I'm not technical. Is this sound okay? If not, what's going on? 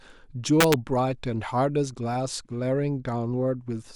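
No. From 0.61 to 0.74 s the speech snaps with harsh, violent cracks. This is integer overflow: loud peaks exceed the number limit and wrap around to the opposite extreme instead of being capped.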